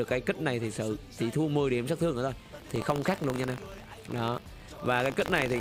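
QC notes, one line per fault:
2.38–5.61 s, buffer tearing: a steady robotic buzz at 50 Hz runs to the end, heard only under signal. The program writing the ring buffer and the hardware reading it have slipped, so a small sliver of every 20 ms period replays audio roughly 70 ms old, hard-joined both sides.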